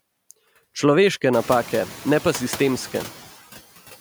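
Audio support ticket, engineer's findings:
Background level pumping across the whole clip: noise drops away in gaps, swells back under speech. Noise suppressor artifacts, noise suppression stage. Bands judged steady noise attenuated per frame, about 12 dB cut, so the floor tracks speech activity. Room noise climbs about 19 dB near 1.5 s, sitting about 18 dB below speech.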